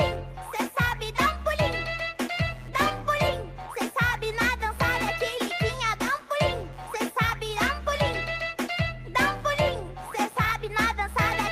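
Computer activity noise runs through the whole clip: load changes in the computer shift the audio circuit's shared ground, adding a buzzing, chirping pulse at around 150 Hz, roughly 30 dB below the sound, that tracks the machine's activity rather than the audio.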